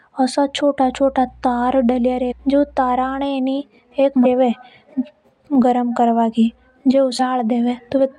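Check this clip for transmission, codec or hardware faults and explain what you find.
Two faults are present in this speech clip.

Mains hum runs from 0.84 to 3.25 s. It is a steady low tone at 60 Hz, sitting roughly 25 dB below the speech. Power-line current is leaking into the signal path, through a ground loop or from a nearby transformer. The hum lies under the voice as a constant drone.

Damaged data in a compressed stream causes three short glitches: 2.30 to 2.33 s, 4.24 s, and 7.19 s. At each point, part of the encoded stream has been corrupted. The decoder cannot read those frames correctly and loses sync until it finds the next valid frame header. Each event is a brief chirp or blip, each well under 30 ms. The first one falls while the hum is still running.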